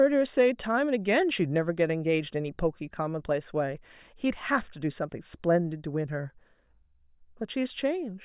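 No technical faults can be heard anywhere in this speech recording. There is nothing to flag at any point along its timeline.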